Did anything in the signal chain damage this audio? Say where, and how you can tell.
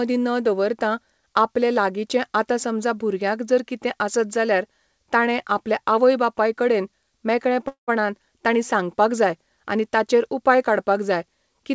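Yes. At the network and jitter-buffer stage there is a call audio freeze from 7.68 to 7.90 s. The last sound is stretched into a fading buzz or hiss, then about 120 ms of silence, and the speech resumes with "ताणी सांगपाक" exactly where it stopped. Packets were likely held up in transit and the buffer ran dry. Unlike packet loss, nothing is cut out: about 198 ms of filler is inserted, adding that much delay. The 8 kHz band limit comes from the G.722 codec path.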